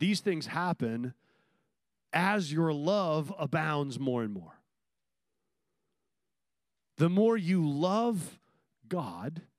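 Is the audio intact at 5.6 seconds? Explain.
Yes, the audio is intact at 5.6 seconds, with no audible fault at that point.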